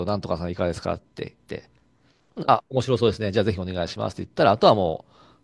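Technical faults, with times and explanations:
Nothing wrong turns up anywhere in this bit of speech; there's no technical fault to point to at any moment.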